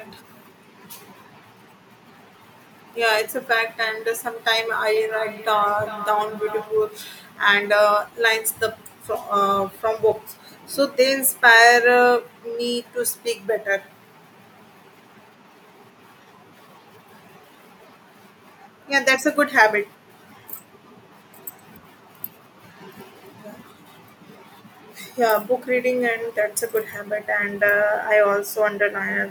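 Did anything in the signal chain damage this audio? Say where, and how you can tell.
Yes, there's feedback echo between two devices from 4.96 to 6.83 s in this speech clip. Each phrase comes back at a steady interval of roughly 400 ms, thinner and more ringing, with the loudest repeat about 15 dB below the speech. That's a call-processing problem: a second device in the same room is playing back what the first device's microphone sent, that microphone picks it up again, and the first device's echo canceller only knows about its own output, so it lets the loop through.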